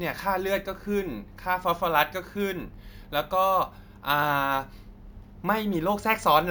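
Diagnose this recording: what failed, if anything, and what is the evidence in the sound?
Sample-rate conversion shows imaging from sample-and-hold upsampling. A metallic fizz, about 19 dB down, fills 8 to 16 kHz throughout. Each 16 kHz sample was repeated, unsmoothed, to 48 kHz.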